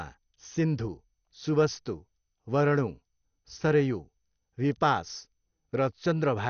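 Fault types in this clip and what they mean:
MP2 compression: throughout the speech, nothing is heard above 6.5 kHz and the sound is dull, with gurgling, granular roughness. Likely MPEG Layer II coding short of bits, consistent with about 48 kbps: upper sub-bands are dropped and the rest coarsely quantised.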